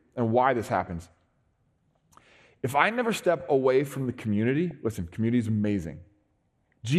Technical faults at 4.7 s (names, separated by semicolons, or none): MP2 compression; DAB burbling